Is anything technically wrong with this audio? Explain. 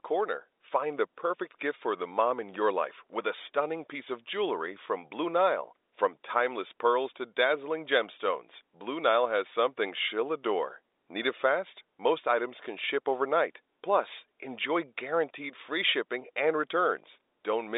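No, nothing in this speech clip is technically wrong. It carries the narrow band of G.711 telephone coding, roughly 300 Hz to 3.7 kHz with nothing above 3.8 kHz, as a normal landline call would.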